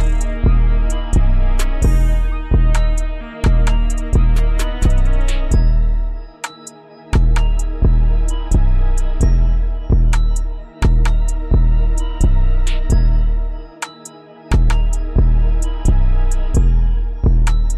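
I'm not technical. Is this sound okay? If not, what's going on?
No. Compressed frames skipped at 14.68 s: a couple of 23.2 ms chunks never play, so the sound jumps ahead about a twentieth of a second.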